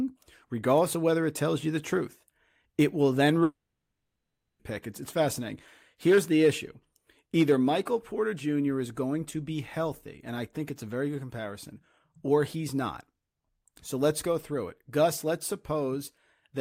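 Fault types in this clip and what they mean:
long network dropout: The speech stops at 3.43 s. The last sound trails on as a fading buzz, then about 1 s of silence. Speech returns at 4.61 s, 1.16 s lost. The likely cause is lost network audio the receiver briefly covered.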